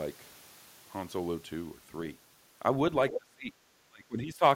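At 3.11 s a second voice breaks in. It lasts only a brief scrap, ending at 3.18 s. It sits just a little below the talker's level. This is the other side's voice leaking through. It is likely loudspeaker echo that the echo canceller failed to remove.

From 3.12 to 3.52 s the talker's voice sinks, by up to about 25 dB. It drops again from 3.87 to 4.43 s, by up to about 30 dB, almost vanishing. This is speech suppressed in double talk. The canceller likely confused the talker with echo and turned both down.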